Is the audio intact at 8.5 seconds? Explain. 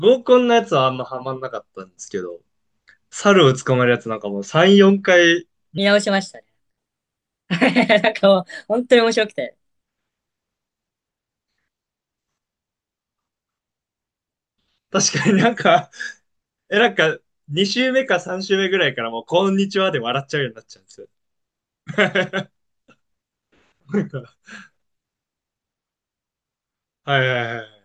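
No, 8.5 seconds sits inside a section at the wrong speed, running from 5.78 to 9.83 s. The speech plays back 1.26 times too fast, likely from being run against the wrong clock, so it sounds hurried and lifted roughly four semitones higher.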